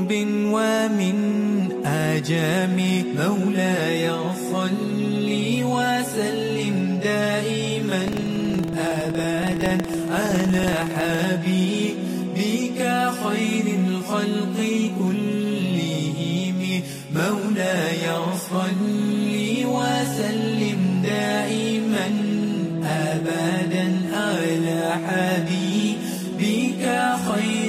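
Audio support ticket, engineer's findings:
Buffer tearing, 8.03 to 11.27 s: steady robotic rattle at about 21.5 Hz, only under signal. Points to a 2048-sample ring buffer, writer and hardware reader out of step. A small slice of each period replays audio from around 150 ms back, with hard joins.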